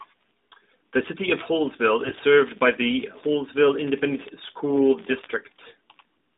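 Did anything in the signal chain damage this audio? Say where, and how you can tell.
Yes, on the radio link: AMR bit errors from 2.00 to 2.22 s. The narrowband AMR speech keeps its pitch and level there but turns hoarse and gargly. That fits about eleven 20 ms frames where a few percent of the weakly protected bits flipped, misplacing excitation pulses and skewing gain and spectral values.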